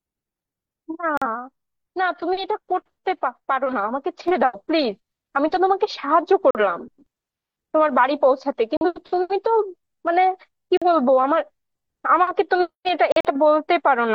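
Corrupt frames were rejected by the decoder and muted, leaving abrupt silent holes with timing intact: 1.17 to 1.27 s, 6.51 to 6.60 s, 8.77 to 8.86 s, 10.77 to 10.86 s and 13.12 to 13.30 s, the longest spanning what sounds like several frame lengths. At 4.28 s a sudden gain jump, likely a gain step applied without a ramp, lifts the speech and its background noise together by about 4 dB and holds that level to the end.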